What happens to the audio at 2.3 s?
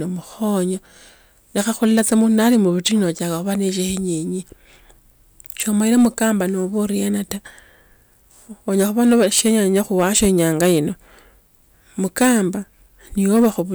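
At 2.3 s the speech is in the middle of a stretch of hard clipping that runs from about 1.58 to 2.88 s. A stage in the chain was driven roughly 5 dB past what it could pass, so every peak that exceeded its limit was sliced off flat. Those squared-off tops generate harmonics high above the original content, and on this speech they come through as a gritty crackle riding each loud syllable.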